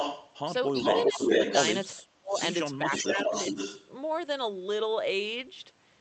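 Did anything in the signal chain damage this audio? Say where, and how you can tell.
Yes, at the call-processing stage. An echo leak is heard from 0.00 to 0.34 s, 0.77 to 1.78 s and 2.32 to 3.88 s: a distinct delayed copy of the speech trailing it by about 0.40 to 0.42 s. It is roughly as loud as the speech at first, louder in the middle stretch and somewhat quieter in the last. The likely cause is a loudspeaker-side echo canceller letting its microphone pickup return. Room reverb would smear into a tail, but this is a separate, clearly offset repeat.

Speech suppressed in double talk shows up as gain dips while far-side audio on the loudspeaker overlaps the talker: a slight drop at 1.07 to 1.31 s, a very deep one at 1.92 to 2.37 s, and a moderate one at 2.84 to 3.57 s. The likely mechanism is the echo canceller failing to separate near talker from echo and ducking both. Packet loss would instead bring clicks, gaps or concealment artefacts, not level dips tied to the overlap.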